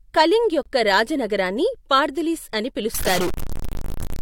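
A speech recording with two faults. At 0.63 to 0.66 s there is a gap between stream segments. A hard-edged hole of about 27 ms cuts in. It fits two 2-second segments whose time stamps leave a short space, which the player fills with silence. From 2.94 s to the end, right after "నగరాన్ని పార్థిలిస్ అని", the sound turns distorted, and the pauses fill with noise. The likely cause is a stuck bit, where one data bit is held at a fixed value and throws roughly half the samples off.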